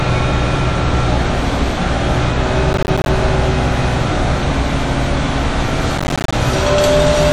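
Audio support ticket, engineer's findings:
Chunks out of order, 0.77–0.94 s and 3.20–3.29 s. Jumbled flicker at hard joins. Probable component: playback queue/buffer writer. 43 ms chunk played late, three chunks behind at first event, one behind at second. No audio lost, sequence wrong.

Processor overload crackle, 2.73–3.08 s and 5.98–6.33 s. Gritty tearing bursts riding on the sound, clearing once load drops. Probable component: audio thread/DSP scheduling. Roughly 10 ms buffers missing deadlines, around fifteen then around twenty, each leaving a hard-edged gap of silence.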